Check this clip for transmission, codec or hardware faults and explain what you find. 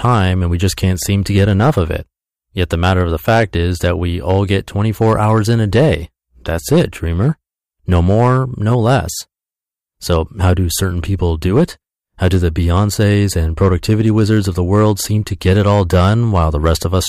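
Hard clipping runs through the whole of this speech clip. The signal reaches some stage about 7 dB hotter than that stage can pass, so the loudest peaks are sliced flat, roughly a couple of percent of the waveform. Those squared-off tops generate harmonics well above the speech band. The result is distortion on the loudest peaks of the speech.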